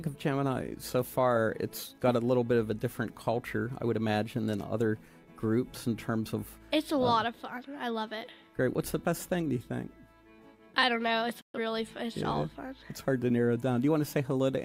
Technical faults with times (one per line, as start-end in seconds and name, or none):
11.41-11.59 digital broadcast dropout